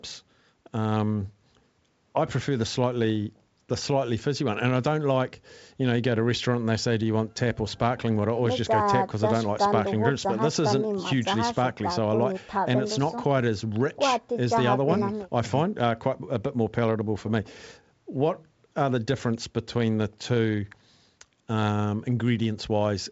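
No faults can be heard.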